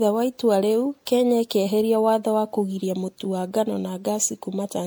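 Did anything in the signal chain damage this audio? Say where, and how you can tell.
Yes, at the codec stage. The speech sounds swirly, hollow and smeared from start to finish, with blurred attacks, even though the top end still reaches 20 kHz. That points to generation loss, likely from about seven MP3 passes near 96 kbit/s, each re-quantising on a new frame grid.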